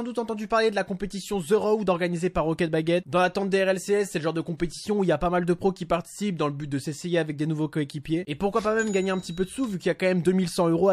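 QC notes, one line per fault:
4.57–4.60 s and 8.03–8.05 s, pre-echo: a short hiss runs ahead of each sharp attack, about 14 dB and about 11 dB over the floor, softening the hits. The block's quantisation noise spreads before the transient, which fits a codec staying on long blocks of about 36 ms.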